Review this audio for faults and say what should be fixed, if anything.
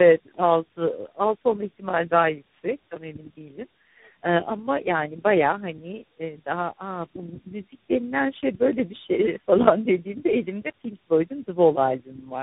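Tandem speech coding runs through the whole clip. The call was decoded and re-encoded at each network border, apparently through three different speech codecs, each working on the previous one's damage. The speech is rough, muffled and warbly, with nothing above 3.8 kHz. To prevent it, use transcoder-free operation so the speech is encoded once and passes through every link unchanged.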